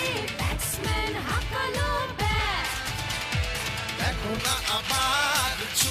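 From 4.40 s to the end, the sound turns thin, bright and sibilant, with treble about 11 dB hot at 10 kHz: pre-emphasis left on, its matching de-emphasis never applied.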